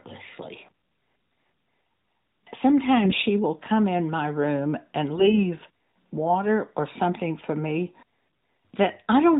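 AMR bit errors strike three times: 1.28 to 1.48 s, 3.04 to 3.25 s, and 5.14 to 5.44 s. Flipped low-priority bits slip past the checksum and scramble pulse and spectral detail. Level and pitch roughly hold, but the speech turns hoarse, scratchy and gargly within the narrowband AMR sound.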